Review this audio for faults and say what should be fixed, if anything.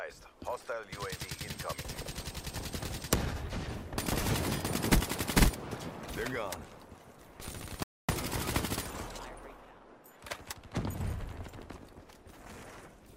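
A playback stall silences the output from 7.83 s to 8.09 s, a gap of about 0.26 s in mid-flow. The sound halts abruptly and then resumes. The likely cause is the player's output buffer running dry, either because incoming data arrived late or because the audio thread was briefly blocked and could not refill it in time. To prevent this, give the player a deeper jitter buffer and keep blocking work off the audio thread.

Time-compressed catch-up follows immediately, from 8.09 s to 9.79 s, with the audio running at about 1.15 times normal speed. Pitch stays where it belongs, but the pacing sounds hurried. This is the player shrinking the backlog built up during the stall by cutting out short slices and cross-fading across the joins until it is back on schedule. To prevent this, remove the stall that triggers it, or limit catch-up to a gentler rate spread over a longer span.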